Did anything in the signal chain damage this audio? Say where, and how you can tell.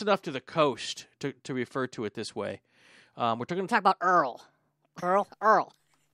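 Yes. From 3.68 s, right after "we're going to", to the end of the clip, there is a section at the wrong speed: the speech runs 1.23 times too fast, so it sounds hurried and about four semitones higher. The stage is likely playback or editing, with that segment clocked against the wrong rate. On a spectrogram the harmonics and formant bands jump upward at 3.68 s, and the waveform's syllable envelopes become visibly shorter and denser.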